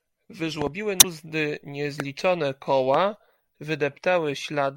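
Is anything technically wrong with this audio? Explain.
Yes. The speech carries two kinds of fault: loud pops and a burst of damaged data in the compressed stream.

Loud pops occur at 0.62 to 0.69 s, where two arrive in quick succession, and again as single pops at 2.00 to 2.02 s and 2.94 to 2.97 s. Each peaks roughly 15 dB above the speech, which continues underneath. A sudden voltage step or pulse, likely from a connector, switch, static discharge or driver glitch, was added to the signal, and the downstream circuitry shaped it into a sharp thump.

Damaged data in a compressed stream shows up at 0.97 to 1.04 s as a brief glitch. Corrupted or missing bytes in the encoded stream made the decoder misread those frames and lose synchronisation. It then resumed at the next valid frame header.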